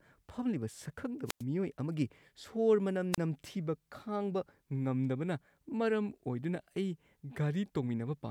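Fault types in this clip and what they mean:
wireless microphone squelch dropout: the radio link from an analogue FM mic fades far enough that the receiver's squelch shuts the output off. You get a quick burst of hiss, a hole of near silence, and then the speech comes back. It happens twice here. The first runs from 1.26 to 1.44 s with a 98 ms mute, right before "ꯃꯤꯑꯣꯏ ꯑꯃꯒꯤ ꯁꯣꯔ". The second is shorter, from 3.12 to 3.18 s, with a 32 ms mute.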